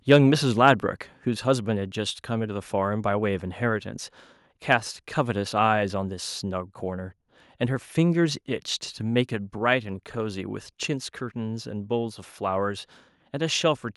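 Microphone overload appears from 0.10 to 0.16 s, right at the start of the clip. The peaks there run about 2 dB past the converter's ceiling, so their tops are flattened, with around 2 percent of the samples in that span clipped. It sounds like a brief harsh, crackling edge on the loudest sounds. The likely cause is an input gain set too high on the microphone.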